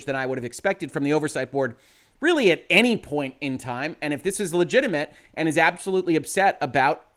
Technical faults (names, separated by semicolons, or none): none